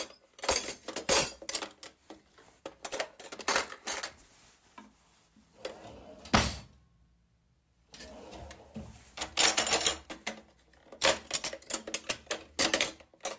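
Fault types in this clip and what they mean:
aliasing: the sound was resampled down without filtering first, so content above 8 kHz folds back as wrong, unrelated tones. It runs throughout, gritty and metallic, only a few dB under the real sound, with the spectrum stopping hard at 8 kHz, which fits a 16 kHz rate.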